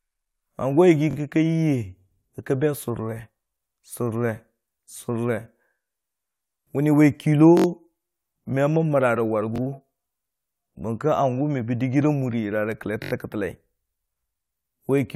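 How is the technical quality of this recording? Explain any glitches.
The speech has four short stutters, all from a repeated buffer. They fall at 1.11–1.15 s, 7.57–7.66 s, 9.56–9.60 s and 13.04–13.12 s. Fresh audio didn't reach the output in time, so the last chunk, about 21 ms (which fits a 1024-sample buffer), got played again, twice extra at 1.11 and 9.56 s and four times extra at 7.57 and 13.04 s. Each sounds like a quick buzzy hiccup with hard joins, and nothing seems to go missing around it.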